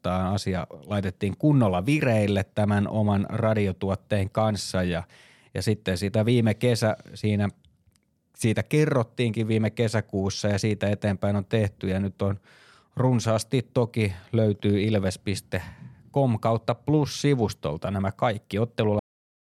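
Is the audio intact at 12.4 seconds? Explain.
Yes, at 12.4 seconds the speech plays through cleanly with no dropout, click, distortion or other fault.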